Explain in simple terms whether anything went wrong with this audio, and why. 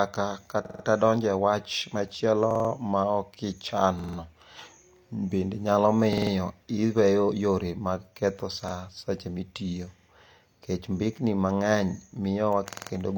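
Repeated buffer faults occur at 0.65, 2.51, 3.99, 6.13 (between "bende nyalo" and "iweyo yore mag ketho"), 8.68, 9.99 and 12.73 s. Each time, fresh speech arrived late, so the player replayed its last chunk of about 46 ms, which fits a 2048-sample buffer. Most repeat four extra times, giving a rapid stutter lasting about 0.19 s; at 8.68 s it repeats once, and at 9.99 s twice. No speech is skipped.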